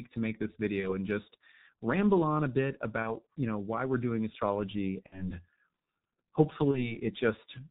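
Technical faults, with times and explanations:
Throughout, G.723.1 codec: the speech sounds heavily muffled and hoarse, with nothing above 4 kHz and consonants smeared together. This fits G.723.1 at around 6.3 kbit/s. The codec rebuilds each 30 ms stretch from a coarse model of the voice that changes only slowly. Fast consonant detail is lost between updates, and its narrow band cuts all high-frequency air and sibilance.
0.80–0.96 s, 3.02–3.13 s, 5.06–5.32 s and 6.71–6.98 s, VoIP packet loss concealed by the speech codec: the speech briefly turns into a buzzy, smeared tone or coloured noise that fades, then stays weak or distorted for a moment after it resumes. The gaps point to a single lost 30 ms frame each time, except at 5.06 s, where about 60 ms went missing. The decoder filled each gap by repeating its last pitch and filter at falling gain. Because every frame builds on the one before, the distortion lasts past the gap itself.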